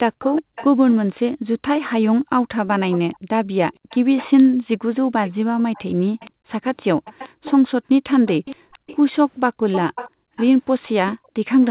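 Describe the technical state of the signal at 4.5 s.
At 4.5 s a delayed copy of the speech sits under the direct signal, trailing it by 468 ms at roughly 15 dB below it, and it persists from 1.87 s to the end of the clip. This is likely an echo leak: the far side was on a loudspeaker, its echo canceller failed to fully remove what its microphone picked up, and the residue was transmitted back. Within the roughly 4 kHz band of the G.711 path, the echo reads as a faint, lagging double of the speech.

Between 4.53 and 4.58 s, about 50 ms, the background is gated by the echo canceller. While the loudspeaker was active, the canceller pulled the microphone gain down hard, and the room sound dips by about 40 dB before returning when the suppression releases. The result is a brief hole in the ambience, a short near-silent notch rather than a click.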